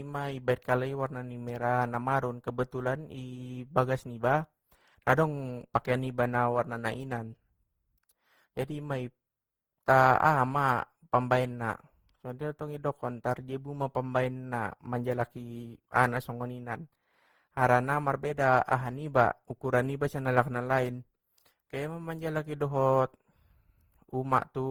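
From start to finish the speech has a swirly, hollow, smeared quality with blurred consonant attacks, likely generation loss from roughly ten lossy Opus passes at a 48 kbit/s setting. Bandwidth still reaches about 20.3 kHz.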